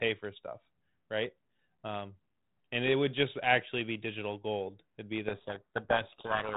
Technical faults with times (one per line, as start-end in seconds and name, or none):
5.28-6.57 codec payload misread